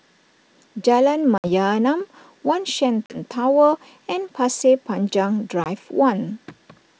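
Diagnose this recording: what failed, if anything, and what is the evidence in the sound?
Packet loss on an ADPCM call, at the network stage: the G.722 stream, wideband and clean at 64 kbit/s, dropped packets at 1.38 s, 3.06 s and 5.64 s. Each gap is a hard-edged silence of about 60, 40 and 20 ms, consistent with roughly three, two and one lost packets. Because ADPCM decoding depends on state from earlier samples, the receiver's predictor and step size drift from the sender's. Speech resumes slightly distorted and settles within tens of milliseconds.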